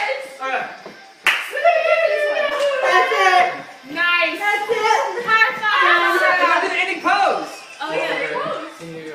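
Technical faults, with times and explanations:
2.49 to 2.53 s, short concealed packet loss: about 20 ms of audio arrived too late to be decoded, so the receiver improvised roughly 12 ms by extending the preceding sound before blending back into real signal, leaving a brief smear where the gap was patched.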